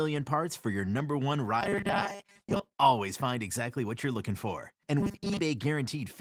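From 1.61 to 2.78 s, between "for your number one" and "always find exactly what", and again from 5.01 to 5.39 s, the speech becomes a rigid metallic buzz locked at 200 Hz. This robotic sound from repeated short buffers likely comes from audio arriving too seldom, so a 5 ms slice is replayed for most of each stretch. The fixed pitch marks it apart from the light Opus coding.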